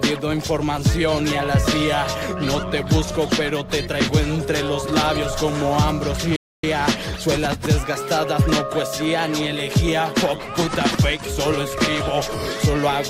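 The player most likely ran short of data or had its output thread blocked at 6.36 s, producing a playback stall: the audio cuts out mid-flow and stays silent for about 0.27 s, resuming at 6.64 s after an audible gap in the sound.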